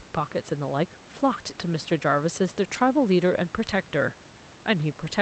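No technical faults can be heard anywhere in the speech. The call codec's band limit is audible as a top end that stops at about 8 kHz, and a low room noise sits about 26 dB below the speech.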